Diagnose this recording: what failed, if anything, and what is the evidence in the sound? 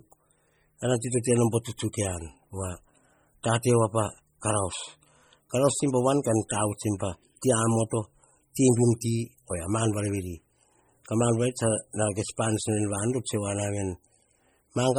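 Heavy codec damage runs throughout: watery, swirling speech and smeared attacks, likely from MP3 compression near 32 kbps dropping weak frequency lines frame to frame, unlike steady broadband noise.

A pre-echo sits at 7.41 s: a brief hiss of about 16 ms before an attack, as codec noise spreads across the transform block. It is not a click, which would lack that smeared lead-in.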